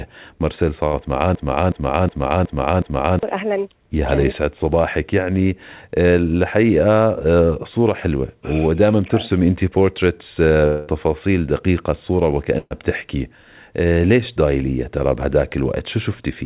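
At 0.86 to 1.09 s a burst of packet loss occurs. About 60 ms of audio never arrives, and the receiver fills roughly 68 ms by extending and fading the last sound, so the gap is a brief fading continuation before speech resumes, slightly further on.

From 1.35 to 3.23 s a broken-record loop follows. A 0.37 s fragment repeats exactly, back to back, five times, likely because the stream stalled and kept resending its last buffered piece. The speech that belonged in that stretch is lost.

At 10.66 to 10.90 s a long network dropout removes about 210 ms, likely from a network interruption. Concealment covers roughly 207 ms with a fading continuation of the previous sound rather than silence, and then speech returns with a skip.

A second burst of packet loss at 12.58 to 12.74 s drops about 120 ms. Around 123 ms is filled with decaying concealment, and about 30 ms falls to silence before the audio picks up again. 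Throughout, the band stops at 4 kHz, which fits a narrowband G.711 call codec.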